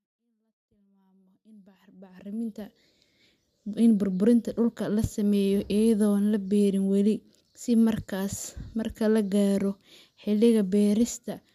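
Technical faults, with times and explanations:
No technical faults are audible.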